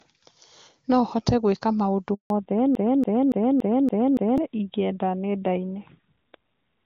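At 2.14 s, just after "hote gwĩka maũndũ", a handover gap cuts the speech for 160 ms, until 2.30 s. The voice fades out within a few tens of milliseconds rather than clicking off, and the lost stretch is simply missing, not repeated or smeared over.

From 2.30 s to the end, a fallback to narrowband takes over. The clear HD Voice sound before the gap gives way to speech with nothing above 4 kHz, duller and rougher. This points to a drop from AMR-WB at its top rate to a narrowband AMR codec. Because the change is a hard cutoff that begins at the handover and never recovers, it is a codec switch and not gradual filtering.

Between 2.75 s and 4.38 s, a broken-record loop repeats a 0.28 s fragment exactly, six times back to back. The speech that should have played there is gone. The repeats are identical, with no fading or variation, which sets this apart from an echo or a stutter. The likely cause is a stalled stream resending its last buffered piece.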